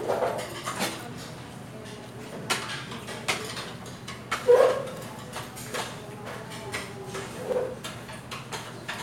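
Overlapping chunks at 2.42 s, 4.97 s and 7.52 s break up this recording of everyday sound with a brief stutter at each point. The audio was handled in blocks about 2.5 s long, and each new block begins 50 ms before the previous one finished, so that 50 ms stretch plays twice at every join. The result is a short repeated fragment and a small click at a steady 2.5 s spacing.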